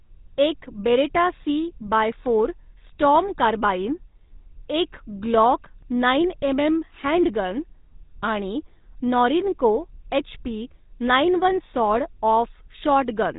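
From start to finish the speech has been through the GSM full-rate codec. It rebuilds the voice from a sparse pulse train, which gives it that buzzy, gravelly grit, and nothing comes through above about 3.8 kHz.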